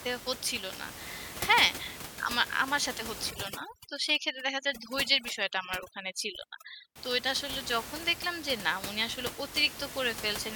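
From 3.31 to 6.96 s the room noise, about 11 dB below the voice elsewhere, drops and breaks up into twinkling specks. This is overdone noise removal: an over-aggressive reducer shut off frequency bands near its noise estimate, taking quiet speech detail too.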